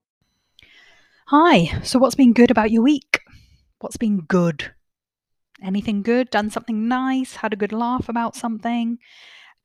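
No technical faults can be heard in the recording at any point, and the signal stays steady and continuous throughout.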